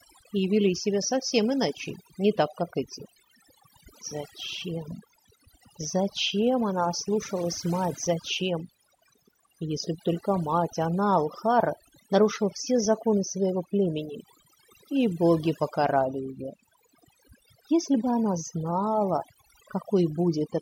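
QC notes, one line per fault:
throughout: overdone noise removal. The background drops between phrases, dotted with twinkling specks. Noise reduction set too hard switches individual frequency bands down or off whenever they resemble the noise, stripping quieter speech detail too.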